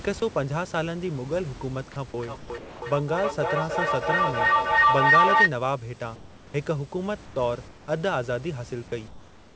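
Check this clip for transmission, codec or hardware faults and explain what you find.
Three kinds of fault are audible: a feedback howl, several stretches of comfort noise standing in for the background, and one passage of speech lost to the voice detector.

Feedback howl, 2.18 to 5.55 s. The microphone picks up a loudspeaker playing the same call, and each trip around that loop adds level instead of losing it. The repeats collapse onto the frequency the loop favours, here around 1 kHz, and swell into a tone, with the loop repeating roughly every 300 ms, that peaks about 8 dB above the speech before it stops.

Comfort noise in place of the background, at 2.38 to 2.50 s, 6.16 to 6.54 s, 7.26 to 7.36 s, 7.68 to 7.88 s, and 9.08 s to the end. During these pauses the real room background, which sits about 21 to 26 dB below the loud speech, gives way to a smooth, featureless hiss. That hiss is about 2 to 6 dB quieter, most at the first gap. 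This is likely discontinuous transmission, with the receiver synthesising noise while the sender stays quiet.

Sound dropped by the voice detector, 2.58 to 2.82 s. For 240 ms the audio turns into steady noise, and about 110 ms of actual speech disappears before the signal returns. The likely cause is the sender's voice detector misjudging speech as background and halting transmission, leaving the receiver to fill the gap with comfort noise.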